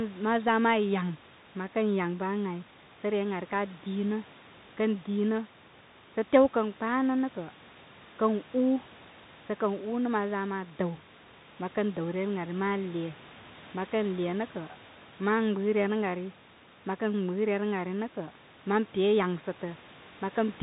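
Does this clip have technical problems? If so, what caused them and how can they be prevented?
Yes. The whole clip has passed through a Bluetooth CVSD headset codec, which fits a 64 kbps narrowband link. The codec sends one bit per sample, saying only whether the signal should step up or down, and nothing above 4 kHz survives. The speech sounds boxed in and dull. Louder, brighter moments overrun the adaptive step and distort, s sounds come out scratchy, and a grainy hiss sits under the speech, distinct from the room noise about 25 dB down. To prevent it, record with a wired or wideband-capable microphone rather than a headset in hands-free mode.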